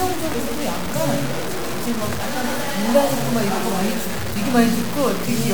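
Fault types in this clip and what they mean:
Low bit depth without dither, throughout: a grainy, gritty distortion rides on the sound and changes with it, and quiet passages break up or sputter. The likely cause is the audio being truncated to 4 bits without dither, leaving error only about 10 dB below the signal.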